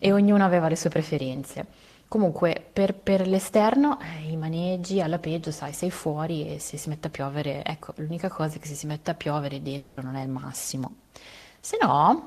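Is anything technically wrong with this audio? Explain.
Yes. This speech clip has two faults.

From 9.77 to 9.99 s, the sound is cut and replaced by a fading buzz lasting about 200 ms. Nothing silent follows. The likely cause is a long network dropout, where the receiver concealed lost audio.

From 10.83 to 10.91 s, an irregular burst of crackle cuts through. This is loose connector crackle. A poor contact rapidly breaks and remakes the signal path.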